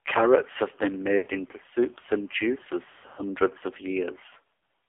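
Throughout, the AMR narrowband mobile codec squeezes the speech into a 300 Hz to 3.5 kHz band with heavy buzzy, synthetic damage, which fits a low mode near 5.9 kbps. A spectrogram shows nothing above 3.5 kHz.

Lost AMR speech frames follow at 1.18 to 1.28 s, roughly 80 ms. The decoder repeats stale settings at falling gain, so the sound smears and dips. A waveform shows a brief sagging envelope. At 2.9 to 3.23 s, scattered losses covering about 200 ms cause repeated warbling dropouts. At 4.54 to 4.68 s, a mostly continuous gap of about 100 ms fades toward silence, and the spectrogram blurs into smeared harmonics.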